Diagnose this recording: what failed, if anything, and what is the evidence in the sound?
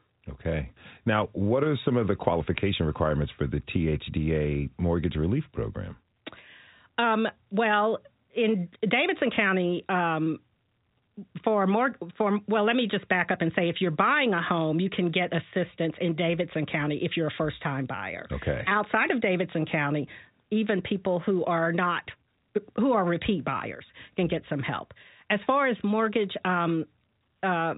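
Nothing failed here: the speech comes through the G.711 telephone coding at its ordinary telephone bandwidth, with no stage of the chain showing a problem.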